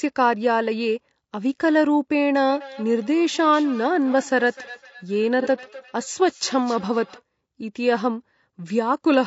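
From the start the speech sounds rough and grainy, with noise filling the gaps between harmonics and a thin, synthetic top band. This is most likely low-delay AAC compression, pointing to AAC-ELD at a low rate near 32 kbps. On a spectrogram the harmonic lines look smeared and the upper band looks blocky.

From 2.49 s to 7.23 s there is feedback echo between two devices. One device replays the other's microphone into the same room, and that sound is picked up again, so each word returns roughly a third of a second later, thinner and ringing. The repeats peak at about 20 dB below the speech. A spectrogram shows faint, evenly spaced copies trailing each syllable.

From 5.42 s to 5.47 s, AAC frame loss with concealment leaves a brief smeared, phasey patch, which fits one lost frame of about 30 ms rebuilt from the previous spectrum. On a waveform this appears as a short stretch of blurred, noise-like texture, and on a spectrogram as a vertical smudge.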